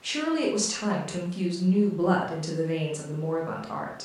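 Listening to the speech recording, nothing stood out as a technical fault.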